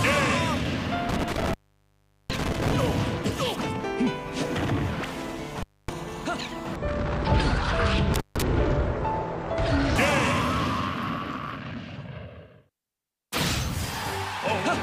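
Three dropouts with crackly edges, around 1.09 to 2.73 s, 5.58 to 5.92 s and 8.14 to 8.42 s, point to an intermittent contact: a loose plug or cable briefly opening the line. The gaps run about 0.76 s, 0.26 s and 0.15 s, with faint hiss while it's open.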